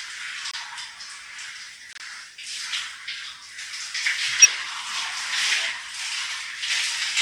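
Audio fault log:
0.51–0.55 s and 1.93–2.03 s, corrupt frame muted: the sound abruptly drops to silence, once briefly and then for about 100 ms. Corrupted compressed frames were rejected by the decoder and replaced with silence, so timing is unchanged.
4.42–4.46 s, corrupt frame decoded: a brief glitch, lasting roughly three frames. Damaged frame data was decoded anyway, placing energy at the wrong frequencies.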